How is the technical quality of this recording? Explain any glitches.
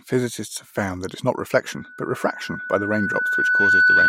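The recording is marred by loudspeaker feedback squeal. From 1.70 s to the end, a steady 1.5 kHz tone swells over roughly two seconds, ending up around 10 dB above the speech. The microphone is picking up its own loudspeaker, and the loop gain at that frequency exceeds one, so the tone feeds itself.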